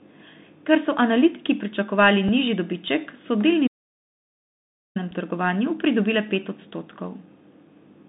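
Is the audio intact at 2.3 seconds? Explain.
No. At 2.28 s, between "so analitiki pričakovali" and "nižji dobiček so", a Bluetooth headset packet was repeated: a voice packet on the headset link went missing, and the decoder replayed the previous packet's bits to fill the gap. The gap lasts about 3.8 ms, which points to a single lost packet. Because the repeat is not sustained, it does not build into the 267 Hz buzz that a run of repeats would produce. It is heard only as a brief tick in the speech.

The moment also carries the Bluetooth CVSD headset codec that runs through the whole clip. The link sends one bit per sample saying up or down, and the step size adapts to follow the signal, which fits a 64 kbps CVSD channel. Only the 150 Hz to 3.7 kHz band survives. The codec damage is plainly audible: there is a granular hiss beneath the speech, s sounds come out scratchy, and loud high-pitched passages distort where the step cannot keep up.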